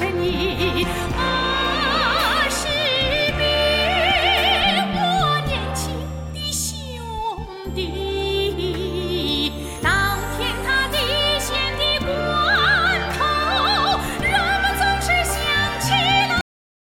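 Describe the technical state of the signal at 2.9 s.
At 2.9 s the signal is intact, with no dropout, distortion, glitch or other fault audible at that moment.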